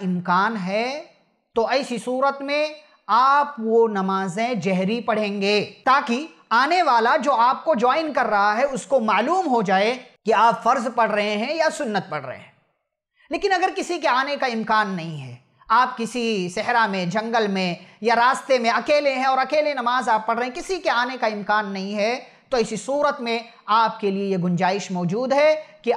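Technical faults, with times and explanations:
Nothing technical stands out anywhere in this recording, so there's nothing to list here.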